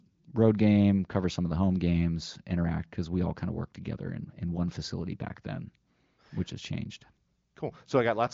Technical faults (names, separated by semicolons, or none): none